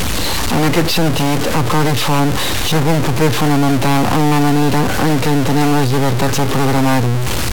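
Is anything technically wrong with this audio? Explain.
Yes. A stuck bit runs through the whole speech clip, most likely from one data bit jammed high or low. This adds harsh, buzzy distortion, and the pauses fill with fairly loud noise.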